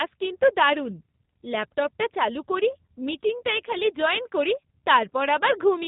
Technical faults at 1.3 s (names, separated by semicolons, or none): G.729 codec